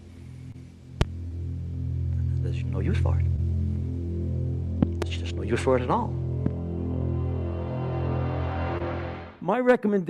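Short concealed packet loss hits at 0.51, 1.28, 3.36 and 8.78 s. Each time about 20 ms never arrived, and the receiver papered over it by extending the previous sound, leaving a brief smear or wobble. Loud pops land at 1.01, between 4.83 and 5.04 s as a quick double, and at 6.46 s. They jump out about 20 dB above the sound (the last about 15 dB), likely from a plug, switch or static discharge.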